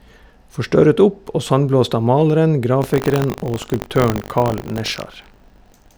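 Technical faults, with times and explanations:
2.8 s to the end, buffer tearing: a steady 50 Hz rattle sits on the speech because the ring buffer's write and read points have crossed, so a small slice of each 20 ms period is audio about 70 ms stale, hard-joined on both sides.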